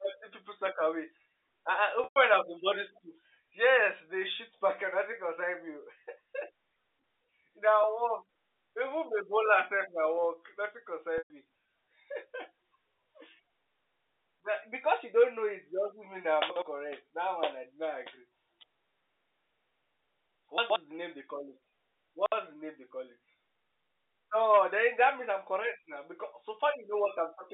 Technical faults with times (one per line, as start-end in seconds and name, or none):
2.04-2.16 packet loss with pitch repetition
11.18-11.30 packet loss with pitch repetition
16.50-16.62 chunks out of order
20.58-20.76 chunks out of order
22.14-22.32 chunks out of order